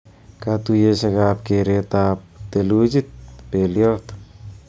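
No technical faults are audible.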